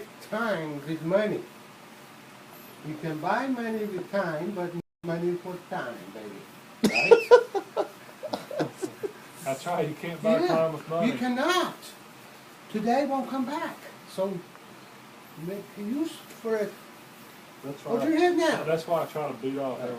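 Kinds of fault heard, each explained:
Playback stall: The player most likely ran dry of buffered data, or its output thread was held up, so nothing reached the output until it caught up again. In this clip the sound cuts off abruptly in mid-flow at about 4.80 s and stays silent for roughly 234 ms, returning at about 5.04 s. The gap is long enough to register as a distinct dropout rather than a click or glitch.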